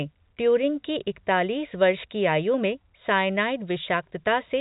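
No faults are present; the speech carries the narrow telephone band of G.711 coding, with nothing above about 3.8 kHz.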